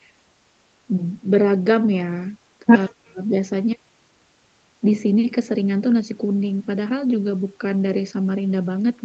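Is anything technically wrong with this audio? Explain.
Yes. Speech suppressed in double talk: at 2.6 s and 2.87–3.36 s the speech dips by about 10 dB, then about 35 dB, likely an echo canceller muting overlapping talk.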